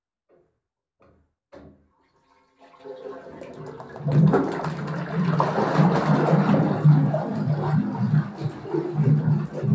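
A recording of everyday sounds, affected from start to finish by a wrong sample rate. Everything runs at half speed and sits a full octave low, 12 semitones down. Speed and pitch drop together by the same factor of two. That fits 32 kHz audio played back at 16 kHz without conversion.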